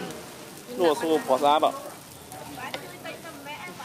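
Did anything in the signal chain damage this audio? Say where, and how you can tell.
No, nothing in the signal chain damaged this audio, and there is no point anywhere along it where harm can be heard.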